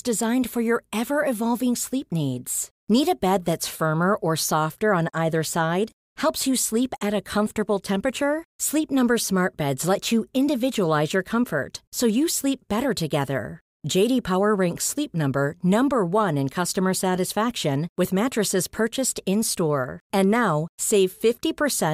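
A speech recording, with no technical faults to report. There are no events to time and no causes to trace anywhere in it.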